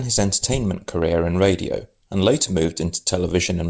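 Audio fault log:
No faults heard in this clip.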